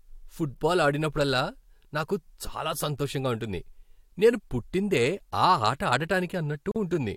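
At 6.71 s the speech drops out abruptly for about 45 ms, until 6.76 s, then resumes exactly where it stopped, edges smeared. This is a gap at a join of encoded pieces: separately encoded sections were joined untrimmed, leaving encoder start delay and end padding as silence.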